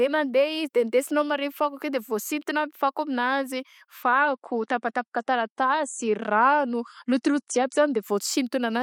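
An adaptive stream at a lower bitrate runs from 4.03 s to 8.03 s in this speech clip. When the connection slowed, the player switched to a leaner encoding of the same audio. Without any gap, the treble suddenly collapses to nothing above 10.6 kHz and compression artefacts thicken. The change in quality is consistent with an MP3 stream dropping from around 128 kbit/s to around 42 kbit/s. At 8.03 s the fuller version returns just as abruptly.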